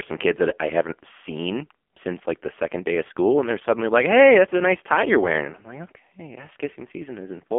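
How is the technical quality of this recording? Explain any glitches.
The technical quality is poor. The speech has passed through a heavily compressed mobile phone codec for the whole clip.

The fault is AMR narrowband mobile codec damage. Nothing above 3.4 kHz remains, and little below 250 Hz. Each short frame is rebuilt from a crude vocal-tract model and a few pulses. The heavy buzz and synthetic tone fit a low 5.9 kbps mode.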